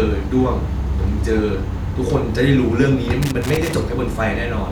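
A speech clip with a burst of loose connector crackle from 3.22 to 3.75 s, roughly half a second of irregular scratching. A worn or dirty contact in the signal path is making and breaking as it moves, chopping the signal.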